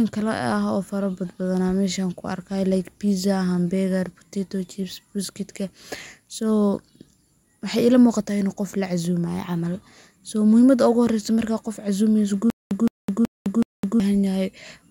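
From 12.5 to 14.0 s, a stutter with silent gaps: the same 166 ms burst returns every 375 ms with dead silence between, not new audio, likely from a stalled stream.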